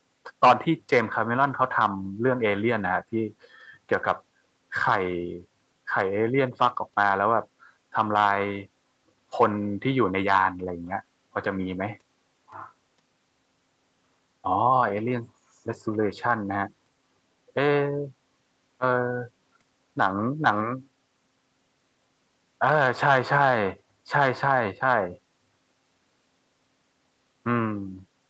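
No technical faults occur in this speech clip, which passes through normal call processing and a call codec with nothing above 8 kHz.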